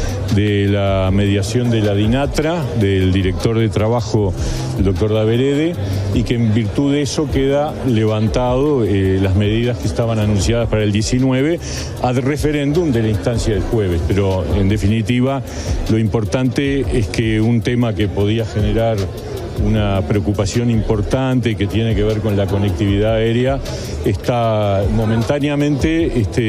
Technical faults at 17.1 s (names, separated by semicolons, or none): clock drift buffer slips